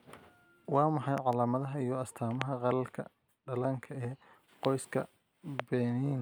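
Speech, interrupted by loud pops. A double pop lands at 1.18 to 1.35 s, then single pops at 2.42, 4.65 and 5.6 s. All stand well above the speech, which continues underneath. A likely cause is voltage spikes from a switch, plug or static.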